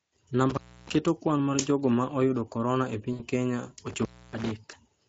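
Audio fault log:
Throughout: Speex codec. The speech has a plainly audible hoarse, noisy grain, which points to a middle Speex setting near 16.8 kbps. At that rate the CELP coder has few bits for the excitation, so the voice texture roughens.
0.50 to 0.95 s and 3.87 to 4.51 s: intermittent contact. The sound cuts out for about 300 ms and then about 280 ms, with crackle at each edge. A loose connection briefly opens the line, leaving only faint hiss until contact returns.
3.13 to 3.22 s and 4.71 to 4.76 s: VoIP packet loss concealed by the speech codec. About 60 ms, then 20 ms, of sound is replaced by a stretched, fading sound, which fits three lost 20 ms frames and then one. The decoder extends its last pitch and filter while lowering the gain. The voice stays weak for a moment after each gap.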